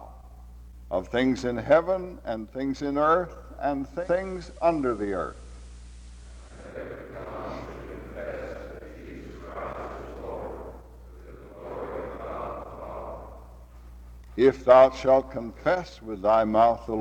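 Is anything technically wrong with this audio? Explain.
Yes. From 3.91 to 6.81 s there is a digital radio blending to analogue. The receiver lost its digital signal and cross-faded, over about 0.19 s, to the same station's FM broadcast, then returned. During that stretch, hiss rises to roughly 35 dB below the audio. The level shifts by about 1 dB at the switch.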